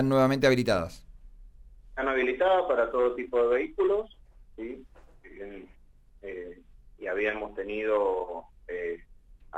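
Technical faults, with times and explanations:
No technical faults can be heard, so there are no times or explanations to give.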